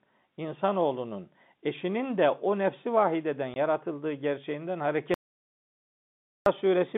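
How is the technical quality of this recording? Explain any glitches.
The recording has two glitches, both gaps of silence, heard through a telephone-band channel that passes roughly 150 Hz to 3.6 kHz, as G.711 telephone coding does.

At 3.54 to 3.56 s there is packet loss filled with silence. A stretch of the stream never reached the receiver, and nothing was synthesised to cover it, so the output was simply silent for 20 ms, which fits one lost 20 ms packet. The speech is chopped by a brief hole with hard edges.

From 5.14 to 6.46 s comes an audio dropout to silence, lasting about 1.32 s. The input feeding the recorder was likely interrupted, perhaps by a disconnected device, a failed link or an accidental mute, while writing continued with silence. The speech stops dead mid-flow and resumes just as suddenly. The gap is silent with no room tone beneath it, and whatever was said during it is lost.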